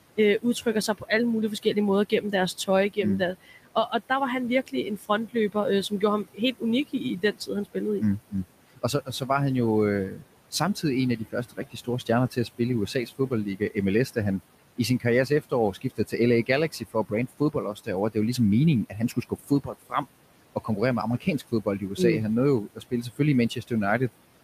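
Speech recording, with room noise sitting about 17 dB below the talker, and a noise suppressor running over the whole thing that's causing two kinds of trouble. First, you get noise suppressor artifacts throughout: it's pulling the background down by about 18 dB in the gaps, so the noise drops away between words and comes back up underneath them as it works band by band, frame by frame. Second, there's speech cut by the noise suppressor, where it mistakes parts of the talker for noise and turns them down along with the background, so bits sound swallowed. That happens in six stretches: 0.17 to 1.1 s, just before "alle mulige"; 1.63 to 4.1 s, between "alle mulige" and "der var han"; 4.67 to 9.3 s; 10.1 to 14.17 s, right after "han jo"; 14.77 to 21.99 s; and 22.75 to 23.72 s. The deepest dips are about 16 to 19 dB. Only short pieces inside each stretch get hit, adding up to roughly a fifth of a second in the first and around a second and a half in the long 14.77 s one.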